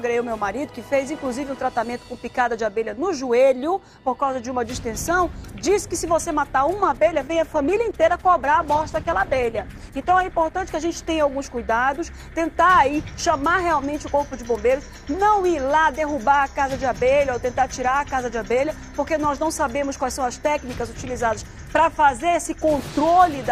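At 6.81 s there's a call bitrate drop lasting until about 10.69 s. The encoder's bit budget collapsed, so the audio turns coarse and watery, with the top end cut away, sounding like a fall from around 48 kbps to roughly 14 kbps for about 3.8 s.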